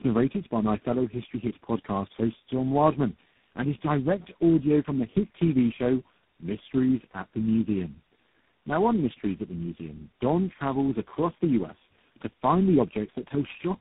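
Tandem speech coding throughout: the speech sounds re-coded by about four successive speech codecs, each degrading the last's output. It is rough, warbly and muffled, with nothing above 3.8 kHz.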